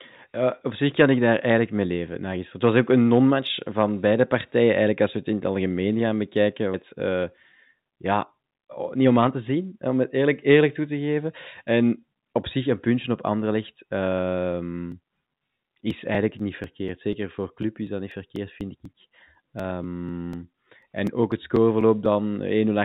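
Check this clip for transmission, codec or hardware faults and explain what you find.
Two faults are audible in the speech, and both sit on top of a call path whose sound is band-limited at 4 kHz.

The first is a jitter buffer speed-up from 7.72 to 9.96 s. The receiver's buffer had filled past its target, as happens when delayed packets arrive in a bunch. To drain it, the receiver cut out short pieces, each one or a few pitch periods long, over and over. About a fifth of a second was removed. The speech plays at 108% speed but keeps its pitch. It sounds briefly hurried.

The second is periodic USB or driver dropouts from 14.92 to 22.06 s. At a steady 0.246 s interval, something blocked the audio driver or the USB transfer. Each time, a few milliseconds of audio were skipped outright rather than filled with silence. There are around thirty of these gaps. They come through as an even train of ticks, roughly four per second, heard only while sound is present.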